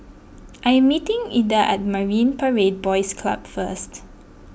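No faults are audible anywhere in this speech recording.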